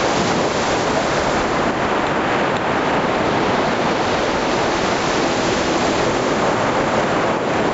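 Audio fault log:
Throughout: gain pumping, the gain swings by about 10 dB, bringing loud and soft parts closer in level and squashing the sound, likely from excess input gain driving a fast limiter.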